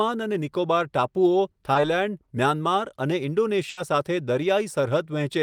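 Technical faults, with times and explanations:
1.73–1.77 s, short concealed packet loss: a brief smear in the speech, just a few hundredths of a second long. About 20 ms of audio never reached the decoder in time, so the receiver continued the preceding sound across the gap and then blended back into the real signal.
3.69–3.79 s, burst of packet loss: the speech stalls into a held, fading continuation of the last sound, then resumes further along. About 80 ms in a row arrived too late or not at all, so the receiver extended and turned down what it had, and that stretch is missing.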